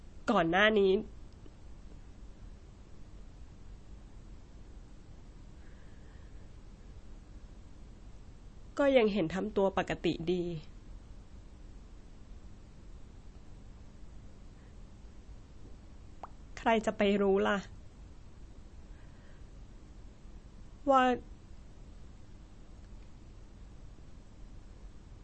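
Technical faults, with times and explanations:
Throughout, MP3 compression: The speech has nothing above 8.4 kHz, so its top end sounds dull and boxed in. The damage is plainly audible as a watery, swirling texture, with metallic chirps on s sounds and smeared attacks. This is likely MP3 coding at a low bitrate, roughly 32 kbps. Short of bits, the encoder drops the treble and switches weak frequency lines on and off from frame to frame.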